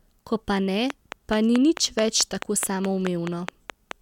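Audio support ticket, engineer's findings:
Train of clicks, 0.90 to 3.92 s. Regular ticking at about 4.7 clicks/s, around fifteen in all, uniform shape, peaks roughly 15 dB above the speech and audible in pauses. Waveform: evenly spaced sharp spikes. Spectrogram: thin vertical broadband lines at fixed intervals. Likely pulse injection from nearby equipment interference or a faulty connection or power supply.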